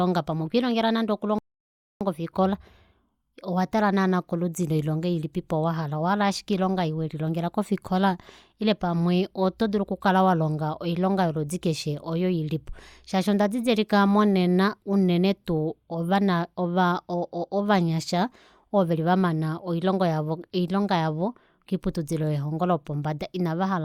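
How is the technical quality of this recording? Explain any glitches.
One glitch stands out in this speech clip. At 1.39 s a rebuffering stall cuts the audio to silence for about 0.62 s, until 2.01 s. The player exhausted its downloaded data and waited for more. Unlike a dropout, nothing is skipped: playback picks up exactly where it stopped, only later.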